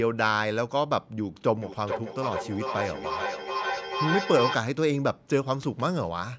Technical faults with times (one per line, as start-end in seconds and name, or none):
1.62-4.64 feedback echo between two devices